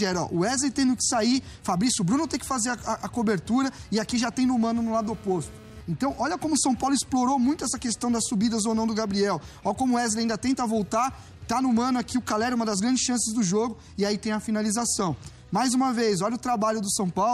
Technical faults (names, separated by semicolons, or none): GSM phone buzz